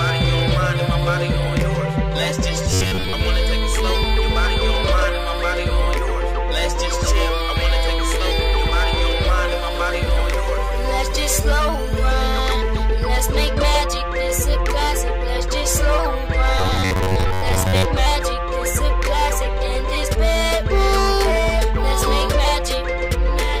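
Robotic sound from repeated short buffers appears at 2.71 to 3.14 s and again at 16.59 to 17.86 s. In both stretches the sound collapses into a rigid, metallic buzz near 93.8 Hz, still loosely tracking the underlying audio. The likely cause is that fresh audio arrived too slowly, so a fragment of roughly 10.7 ms was replayed over and over, covering around seventy percent of each stretch while the real material was skipped.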